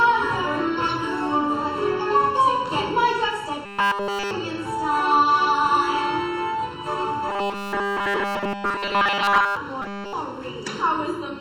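Channel delay (comb filtering) runs throughout: one channel trails the other by under a millisecond, and summing them cuts evenly spaced notches from around 700 Hz, leaving the sound hollow and phasey.

Robotic sound from repeated short buffers appears at 3.66 to 4.31 s, 7.29 to 9.57 s and 9.82 to 10.13 s as a rigid, metallic 200 Hz buzz. It is likely caused by a 5 ms buffer being replayed in place of nearly all the fresh audio.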